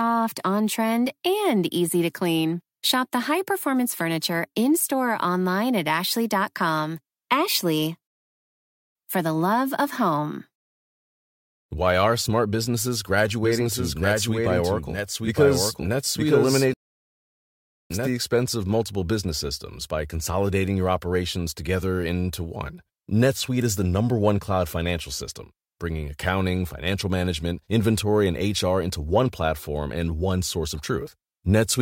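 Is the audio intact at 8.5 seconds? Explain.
No. From 8.07 to 8.95 s a playback stall silences the speech for about 0.88 s, likely because the player ran short of data or was blocked, before it resumes on "for the love of". Unlike brief dropouts, this is one long, clean silence.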